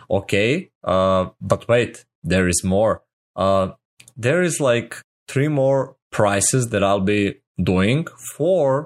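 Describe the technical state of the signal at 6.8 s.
At 6.8 s the speech signal is intact, with no dropout, distortion, glitch or other fault to be heard at that moment.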